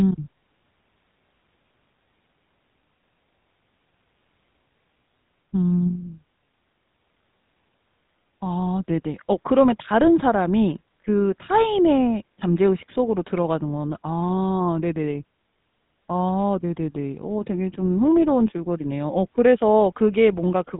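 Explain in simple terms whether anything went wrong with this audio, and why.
The speech went through the old GSM full-rate phone codec, which cuts everything above about 3.8 kHz and rebuilds it roughly, so the whole clip sounds muffled, buzzy and gravelly.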